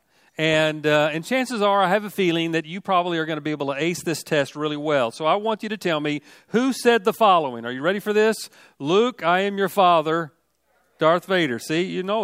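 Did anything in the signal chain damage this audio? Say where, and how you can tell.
No, nothing audible anywhere in the chain points to damage at any stage.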